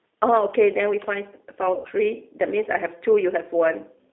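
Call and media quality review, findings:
Rough, slightly synthetic speech throughout, band limited to roughly 300 Hz to 3.6 kHz with nothing above. G.729 codec: speech rebuilt from a vocal-tract filter, pitch predictor and sparse pulses, consistent with 8 kbit/s G.729A. Codec damage plainly audible.

Speech stretched and fading from 1.75 to 1.88 s, weak and distorted just after. VoIP packet loss concealed by the speech codec: about 100 ms missing, fitting five 20 ms packets. The decoder extrapolated the last pitch and filter with decaying gain.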